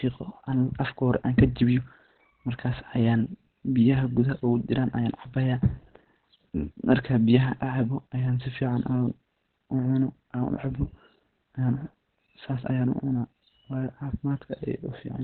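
A speech recording that sounds muffled and hoarse from start to finish, like a telephone line: there is essentially nothing above about 4.3 kHz, and the voice carries the hoarse texture that heavy coding damage leaves behind. The likely cause is Opus compression at a very low rate, consistent with something near 12 kbps, where the encoder drops into its narrowband SILK speech mode and gives up the upper spectrum to save bits.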